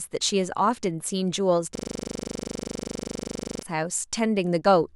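From 1.75 to 3.63 s the speech locks into a system hang loop. The driver stalled while the hardware kept replaying one 40 ms buffer dozens of times, giving a steady 25 Hz buzz. Unlike a dropout stutter, there are no gaps and every cycle repeats identically.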